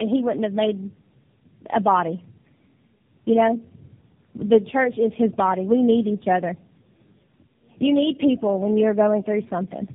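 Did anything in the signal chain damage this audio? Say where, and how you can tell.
Yes, tandem speech coding at the codec stage: throughout, nothing above about 3.6 kHz, with rough, muffled warble. This points to three speech codecs re-encoding each other, which is worse than any single codec.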